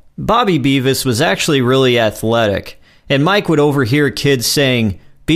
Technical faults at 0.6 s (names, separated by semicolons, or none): none